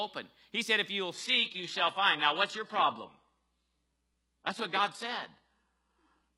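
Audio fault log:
1.14 s to end: adaptive stream at a lower bitrate. Nothing above 11.5 kHz, and the treble turns synthetic without a gap, as playback switched to a lower-bitrate version.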